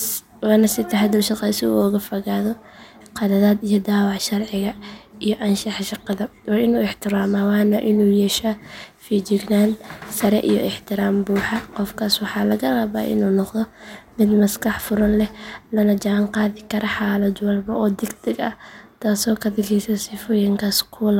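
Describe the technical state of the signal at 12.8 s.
At 12.8 s the speech signal is intact, with no technical fault at that moment.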